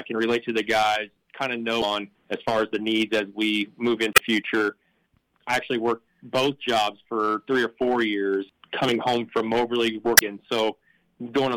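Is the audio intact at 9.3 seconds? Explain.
Yes, the audio is intact at 9.3 seconds, with no dropout, click, distortion or other fault at that point.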